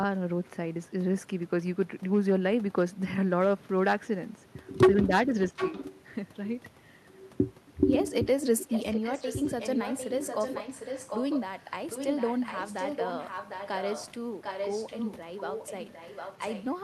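Echo leak is the likely cause in this speech recording: the far end seems to be on a loudspeaker, and its echo canceller let part of the returning sound through, so a copy about 0.75 s late rides under the speech. It appears at 5.50–5.95 s (fairly loud), 8.59–11.41 s, 11.60–11.71 s (barely audible), 11.90–14.07 s, 14.42–15.17 s and 15.39–16.65 s. In the longer stretches it sits roughly 10 to 15 dB below the main speech.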